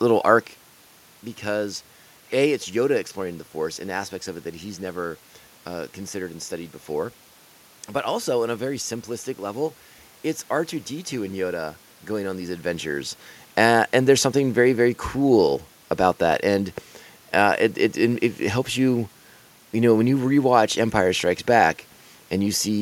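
At 16.32 s, just after "very very cool about", the speech has a block of digital silence. For about 0.67 ms the sound drops out and then resumes. That length fits a block of 32 samples. There is no fade at either edge, so the waveform cuts out and back abruptly. Those two abrupt steps are heard as a tick or dip. The hole is too short to hear as a gap. The most probable cause is an output buffer that was not filled in time.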